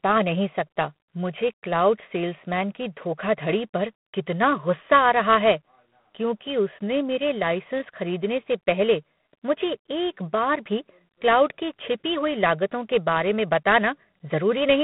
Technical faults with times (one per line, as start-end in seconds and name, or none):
0.00-14.84 G.726 ADPCM